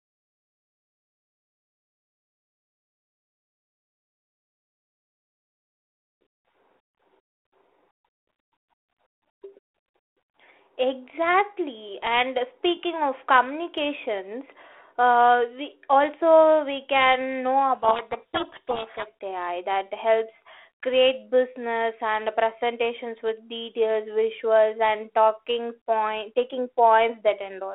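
Speech over a G.726 line at 32 kbit/s, band-limited to roughly 300 Hz to 3.5 kHz, hit by a codec payload misread from 17.75 to 19.07 s, just after "also we can know": the decoder reads each G.726 code word with its bits in the wrong order, burying the speech in harsh distortion that shows on a spectrogram as a dense rasping smear filling the band, with the waveform's envelope losing the syllable shapes.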